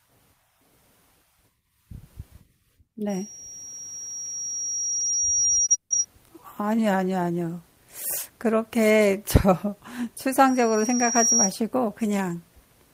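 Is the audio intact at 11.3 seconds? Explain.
No. A loudspeaker feedback squeal runs from 10.47 to 11.55 s: a looping 5.7 kHz tone swells over about 0.7 s to a few dB above the speech, drawing a bright horizontal spectrogram line and a swelling waveform envelope.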